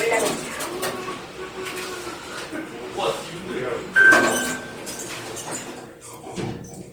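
From start to finish the audio carries plainly audible Opus compression damage, likely from encoding in its music-oriented CELT mode at a low rate, around 24 kbps. The encoder keeps each band's energy but refills starved bands with folded or noisy content, so tonal parts turn rough and grainy. Unlike MP3, there is little swirling or hollowness, and the bandwidth stays full, reaching about 20.2 kHz, so the sound is not muffled.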